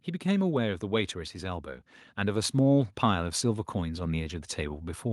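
From about 0.22 s to the end of the clip, the speech grows steadily louder. This is automatic gain rising. The gain control judged the input too quiet and began raising its gain. It does so slowly, across several seconds, not in a single jump. The boost is applied to everything at once. Voice and background noise therefore swell together. The background climbs with the speech, and the level never settles.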